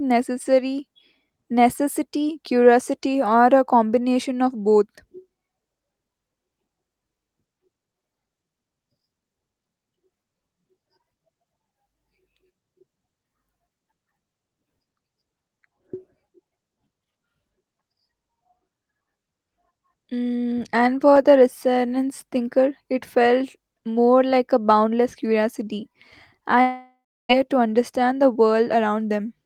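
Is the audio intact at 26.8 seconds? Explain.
No. From 26.61 to 27.31 s the speech gives way to a fading buzz of the last sound, which sinks into silence for about 0.31 s, and resumes with about 0.68 s missing. This is a long network dropout, likely from audio that never arrived.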